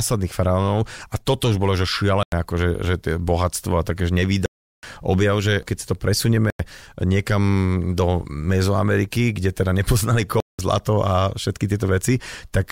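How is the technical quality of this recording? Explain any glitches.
The speech is interrupted four times by a block of digital silence: at 2.23 s after "toto už bolo že" (93 ms), at 4.46 s after "a takéž" (372 ms), at 6.50 s (93 ms), and at 10.40 s after "kde teda nepoznali" (186 ms). Each time an output buffer was most likely not filled in time and was zeroed. The lengths fit blocks of 4096, 16384 and 8192 samples. The sound cuts off with no fade, leaving a short hole each time.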